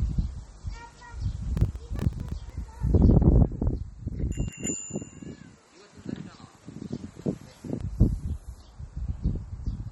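MP3 compression runs through the whole clip. Nothing is heard above about 11.8 kHz, and the remaining sound has a watery, swirling quality, with weak detail flickering in and out and attacks smeared. The likely cause is a low-bitrate MP3 encode, which fits a rate of around 32 kbps. The encoder ran short of bits, so it cut the treble at a fixed point and dropped quieter frequency lines frame by frame.

Processor overload crackle occurs from 1.57 to 2.50 s. The processor kept missing its deadlines for very short audio buffers, each around a millisecond and a half. Roughly twenty of them came out as tiny silent gaps, which together are heard as a gritty crackle riding on the sound until the load eased.

An input switched to a poorer device from 4.48 to 7.81 s, likely a change of microphone or profile partway through the recording. With no silence at either changeover, the sound abruptly drops by about 5 dB and takes on a different tone. 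It also carries a new background noise about 45 dB below it. The original character returns at 7.81 s.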